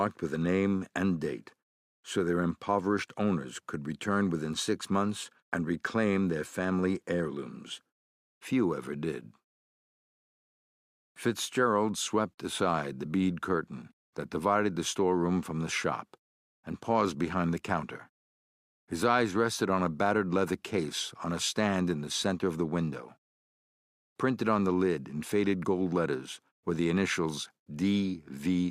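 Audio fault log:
No faults are logged for this clip.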